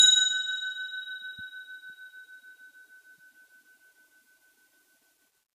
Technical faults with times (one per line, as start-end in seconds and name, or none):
none